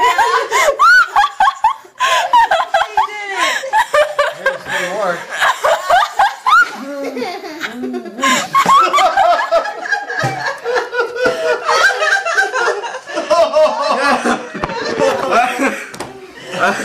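No technical faults can be heard anywhere in the audio, and the signal stays steady and intact throughout.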